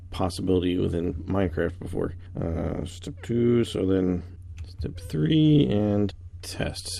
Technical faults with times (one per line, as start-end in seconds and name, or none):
2.46-3.19 jitter buffer speed-up